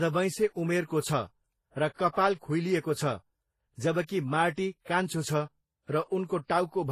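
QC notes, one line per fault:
Throughout: transcoding between lossy codecs. The speech has two sets of coding artefacts stacked together, watery swirl over smeared, grainy detail. This likely comes from a low-bitrate MP3 re-encoded as low-bitrate Vorbis. On a spectrogram, the high bands look patchy and blotchy, with nothing above 14.1 kHz.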